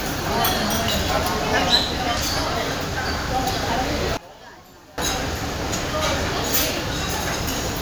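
From 4.17 to 4.98 s the sound drops about 23 dB to a faint residue, likely one channel inverted, cancelling shared content in mono.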